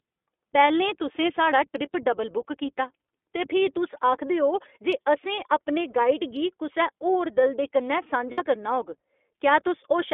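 Speech coded through the iLBC codec, a narrowband VoIP coder, runs the full clip. Energy on a spectrogram stops at about 3.5 kHz and leaves nothing above 4 kHz. The plainly audible coding damage gives a rough, synthetic edge, which fits the 15.2 kbps, 20 ms frame mode. From 8.32 to 8.41 s, lost iLBC frames leave the decoder repeating the last pitch cycle with added noise. This is heard as a held, buzzy vowel, which fits about 60 ms of missing frames. In the waveform it shows as near-identical repeating periods, then the speech resumes almost at once because each frame decodes independently.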